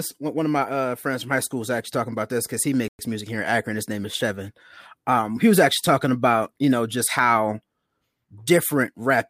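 At 2.88 s, right after "about this because he", the speech drops to silence for about 110 ms. It resumes at 2.99 s with "music here in". This is likely a Bluetooth stall, where delayed packets let the receiver's buffer run empty.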